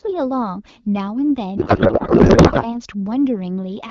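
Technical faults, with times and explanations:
1.57 to 2.74 s, codec payload misread: the speech turns into garbled noise and warble that barely tracks it, as the decoder reads AMR frames with the fields in the wrong places, which points to octet-aligned packing being unpacked as bandwidth-efficient over an otherwise lightly coded AMR-WB stream.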